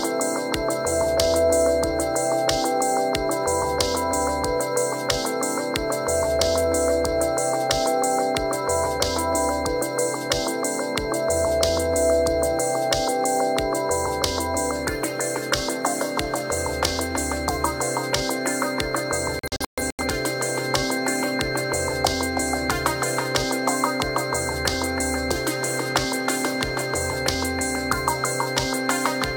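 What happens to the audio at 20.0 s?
At 20.0 s the audio is in a digital broadcast dropout running from 19.39 to 20.04 s. The receiver mutes while frames fail, leaving several silent holes totalling about 0.34 s across roughly 0.6 s, the longest 128 ms, and that audio is lost.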